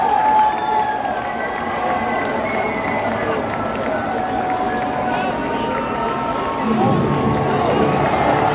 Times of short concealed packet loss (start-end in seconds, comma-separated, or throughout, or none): none